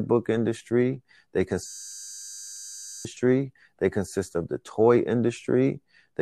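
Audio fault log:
1.67–3.05 s, system hang loop: the driver froze while the hardware kept replaying one 10 ms buffer, so about one and a half seconds of speech is replaced by a steady 100 Hz buzz. The spectrogram shows flat harmonic stripes at 100 Hz multiples, and the waveform shows one identical cycle repeating.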